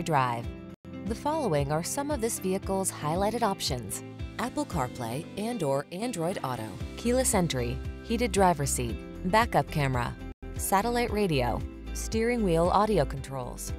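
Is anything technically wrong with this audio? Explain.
Yes. At 5.81–6.02 s and 13.13–13.67 s the sound abruptly falls by about 6 dB, then recovers. It is likely one channel drops out, halving the shared signal after mono summing. A waveform shows a sudden step-down in amplitude; a spectrogram shows uniformly dimmer bands.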